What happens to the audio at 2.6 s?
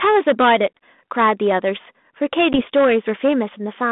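A packet of the G.726 call, about 10 ms of audio, was dropped between 2.53 and 2.62 s. The ADPCM decoder filled it with silence and lost step with the sender, so the speech cuts out abruptly and returns briefly with some distortion. Hard clipping also runs through this moment: the signal is driven about 11 dB past full scale, so roughly a twentieth of samples are sheared flat, adding harmonics far up the spectrum.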